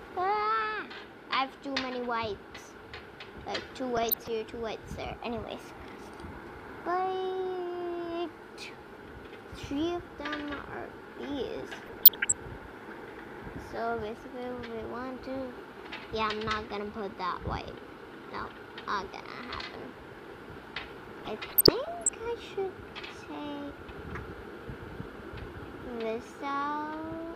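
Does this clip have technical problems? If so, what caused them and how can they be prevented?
Yes. DAB burbling occurs at 3.97–4.28 s, 11.82–12.32 s and 21.19–22.15 s. Weak reception let bit errors, around 0.4–0.7 percent, slip past error correction into the MP2 data, so wrong samples put short blips of noise into single sub-bands. A better-placed antenna or stronger multiplex signal prevents it.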